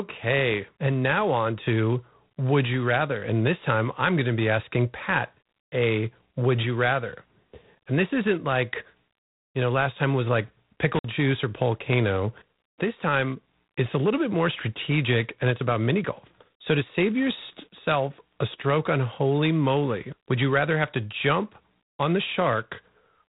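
From start to finish the speech carries G.726 ADPCM damage: a harsh, rasping hiss that rises and falls with the speech level, with nothing above 3.9 kHz. This points to 24 kbit/s coding, where too few bits per predicted difference leave coarse quantisation noise. Unlike steady background hiss, this noise tracks the speech.

At 10.95 to 11.04 s an intermittent contact briefly opens the line. The speech drops out for about 55 ms, with crackle marking both edges and faint hiss in the gap. The crackly edges set it apart from a clean packet-loss dropout.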